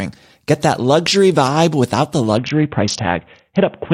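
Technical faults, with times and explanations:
2.37 s to the end, Bluetooth SBC bit pool drop: the speech abruptly loses its treble and turns gritty. This fits the bit pool falling from about 28 to 5, around 54 kbps, starving the upper sub-bands. That grain separates it from simple low-pass dulling.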